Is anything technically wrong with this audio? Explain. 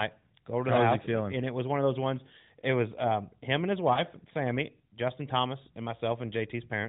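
Yes, there's one glitch. Right after "um him and his", from about 3.94 to 4.02 s, you get lost AMR speech frames. It sounds like a single 20 ms frame failed its check on the radio link, so the decoder patched the gap by reusing the last good pitch and vocal tract settings at reduced gain. You hear it as a brief dip or warble in the speech. All of this comes through AMR narrowband, so the audio is capped at 4 kHz and has a slight codec colouring.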